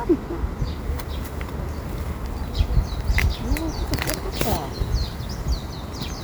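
No audible technical faults here.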